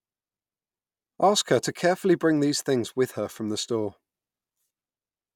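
Nothing in this speech recording sounds technically wrong at any point. There are no events to place in time and nothing that calls for a fix.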